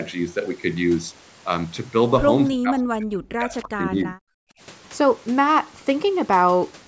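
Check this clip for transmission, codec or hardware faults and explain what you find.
One fault is audible: speech suppressed in double talk between 2.5 and 4.56 s. The speech is turned down for a total of about a second and a half, with the deepest cuts falling nearly to silence. This is likely an echo canceller mistaking the near talker for loudspeaker echo while both sides spoke, and attenuating everything. The band-limiting to 8 kHz comes from the call's microphone processing.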